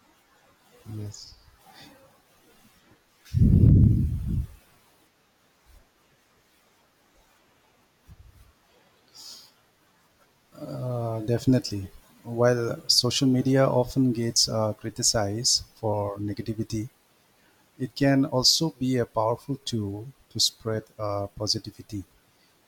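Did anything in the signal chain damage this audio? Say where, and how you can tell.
No, nothing along the chain seems to have damaged this speech recording, so there's no trouble spot to point to.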